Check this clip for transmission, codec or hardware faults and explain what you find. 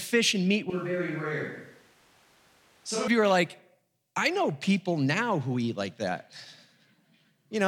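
One fault is present: a switch to a distant microphone from 0.70 to 3.08 s. The close microphone's feed likely dropped out, leaving only a pickup farther from the talker. The speech abruptly turns hollow and roomy, loses bass and falls about 5 dB, with room noise rising to about 30 dB below the speech. It then snaps back to the close sound.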